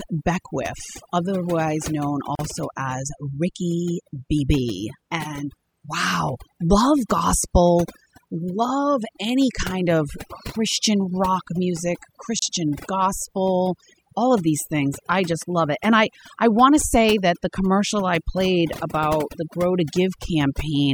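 Overdone noise removal runs through the whole speech clip: the denoiser was set so hard that it shuts off any frequency band sitting near its noise estimate. The background drops and breaks up into twinkly specks, and the quieter parts of the voice get eaten.

At 2.35 s a gap at a join of encoded pieces opens, about 38 ms long, and another hits at 12.39 s, lasting 31 ms, ten seconds apart. The separately encoded chunks kept their start delay and end padding, so the sound stops abruptly, with smeared edges, then picks up right where it left off.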